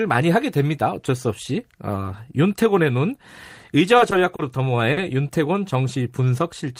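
At 4.36 s the speech briefly stalls from a late packet: the jitter buffer ran dry, so the receiver stretched the last sound by 30 ms until the packet arrived, then resumed where it left off. A second stall follows at 4.93 s, stretched 40 ms. Nothing is lost, which separates this from a dropout or concealed packet loss; the sound is held too long, with a buzz or dip, and timing slips later by the fill.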